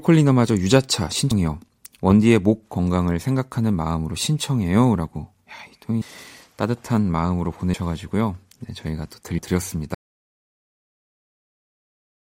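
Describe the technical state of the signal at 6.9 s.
At 6.9 s the speech signal is intact, with no fault to be heard at that moment.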